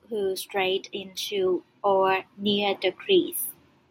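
From 0.07 s to 3.38 s the level climbs steadily, a case of automatic gain rising. The gain control judged the incoming speech too quiet and kept raising its gain, adding about 10 dB over the span, so the voice and the room noise behind it swell together rather than the talker getting louder. On a waveform the envelope widens as a slow ramp; a spectrogram shows every band, noise floor included, brightening in step.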